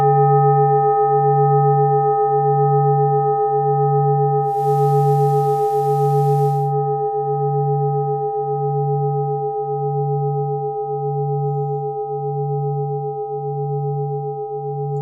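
From 4.41 s to 6.74 s the audio takes on a hiss that sits roughly 30 dB below the signal, and the level shifts by about 2 dB, with a quick cross-fade of about 282 ms into and out of that stretch. This is digital radio blending to analogue: the hybrid receiver lost its digital stream, faded over to the station's FM broadcast, then returned to digital once reception recovered.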